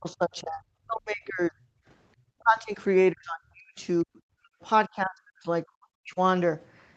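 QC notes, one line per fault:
0.0–1.6 s, 2.39–2.78 s, 3.12–3.81 s, 4.02–4.61 s, 4.88–5.48 s, 5.65–6.19 s: speech suppressed in double talk. The speech sinks by about 25 to 40 dB, likely because the echo canceller, with both sides talking, could not separate it from loudspeaker echo.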